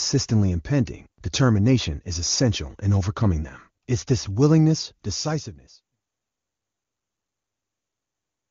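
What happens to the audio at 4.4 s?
At 4.4 s the speech plays through cleanly, with no dropout, click, distortion or level change.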